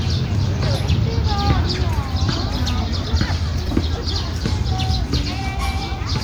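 At 3.67 s there is a repeated buffer: fresh audio arrived late, so a roughly 5.3 ms piece, which fits a 256-sample buffer, played three times back to back. It's a brief click-like buzz with hard joins, not a gap, since essentially nothing is lost.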